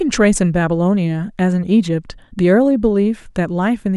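No technical faults are audible anywhere in the recording.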